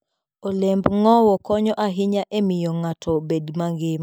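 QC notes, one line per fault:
No faults heard.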